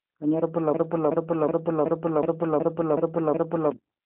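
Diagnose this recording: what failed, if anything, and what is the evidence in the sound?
G.729 codec damage runs throughout, at the codec stage. The speech is confined to about 200 Hz to 3.4 kHz, with nothing above 3.8 kHz, and sounds plainly rough and synthetic. This fits an 8 kbit/s coder rebuilding speech from a filter, pitch predictor and sparse pulses.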